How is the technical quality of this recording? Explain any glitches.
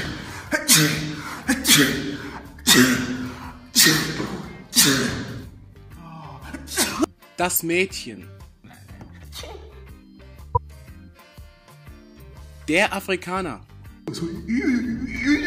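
Two short glitches mar the recording, both from a corrupt frame being decoded. At 7.56 to 7.60 s, damaged bits in a couple of compressed frames were played anyway, so misread gains and codes put energy at the wrong frequencies. It is heard as a brief chirp, blip or burst of noise peaking near -10 dBFS. At 10.55 to 10.58 s, a few frames give a louder glitch near -5 dBFS. On a spectrogram each shows as a narrow vertical smear of misplaced energy; on the waveform, a sudden spike.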